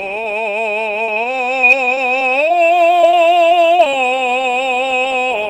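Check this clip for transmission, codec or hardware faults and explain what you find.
Two transmission faults affect this music clip: repeated packet loss with a robotic sound in two stretches, and a jitter buffer slow-down overlapping the second.

Repeated packet loss (robotic sound) runs from 1.05 to 2.59 s and again from 3.01 to 3.94 s. Audio kept failing to arrive in time, so the receiver bridged each hole by extending the sound just before it. None of these holes is longer than 22 ms. In all, about 140 ms is missing in the first stretch and about 120 ms in the second, about 10% and 13% of each span. The music turns choppy, with pieces missing.

The jitter buffer slow-down runs from 3.66 to 4.49 s. The receiver's reserve ran short, so it stretched the audio by repeating tiny slices of the signal. This added about 70 ms and played the passage at 92% speed without changing its pitch. The music drags and sounds drawn out, and the choppy losses are still present at the start.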